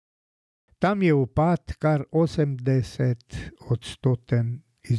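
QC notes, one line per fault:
No technical faults detected.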